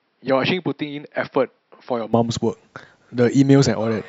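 From the start to 2.13 s the speech sounds dull and boxy, noticeably quieter by roughly 10 dB, and carries a faint added noise floor well below the signal. Nothing reaches above 5.6 kHz, so a spectrogram shows a hard ceiling there that lifts abruptly at 2.13 s, with no gap, as the level steps up in the waveform. This points to the input likely having switched to a poorer device before returning to the better one.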